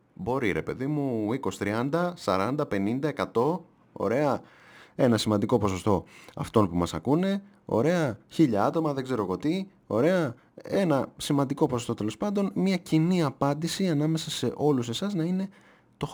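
A crude rate conversion, likely from 48 kHz to 44.1 kHz by nearest-sample picking, leaves inharmonic fizz around 30 dB down that trails louder, brighter speech throughout.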